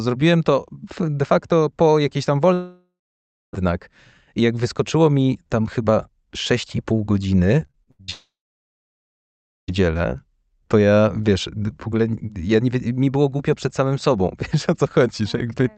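A speech recording carrying two kinds of network fault. From 2.53 to 3.55 s the sound stops for about a second: the last sound is stretched into a fading buzz, then about 0.6 s of near-silence follows, and the speech resumes with that second missing. This is most likely a long network dropout. Unlike a short glitch, the concealment runs out and gives way to dead air rather than patching the gap. A second dropout, likely of the same kind, runs from 8.10 to 9.70 s, lasting about 1.6 s, of which roughly 1.4 s is silence. Just before it, from 7.67 to 8.10 s, the speech turns choppy, which is repeated packet loss with a robotic sound. Five separate holes, the longest 79 ms, are each filled by extending the previous sound, and the fill covers about 45% of that stretch. What sets this apart from a dropout is that there is no silence: short synthetic fills alternate with real speech, so the sound stutters instead of vanishing. 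Throughout, the Opus call path limits the audio to about 8 kHz.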